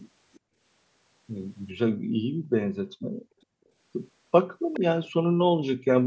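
Right at the start, from 0.33 to 0.40 s, there's a faint ghost of the speech trailing about 419 ms behind, very quiet and over almost instantly. That's an echo leak: the far end is likely playing the call on a loudspeaker, and its echo canceller let a scrap of what its mic picked up slip back down the line. Straight after, from 0.40 to 0.60 s, the room tone ducks by up to about 39 dB, which is the background being gated by the echo canceller as it clamps the mic while the speaker plays. It happens again for longer, 1.93 to 3.75 s, dipping as far as about 40 dB across well over a second, so the background drops out and then creeps back when the canceller releases. At 4.73 to 4.80 s the echo leak returns with that same 419 ms lag, but much louder this time, only moderately below the speech, as a delayed copy. One last brief gating dip of about 38 dB lands at 5.75 to 5.86 s.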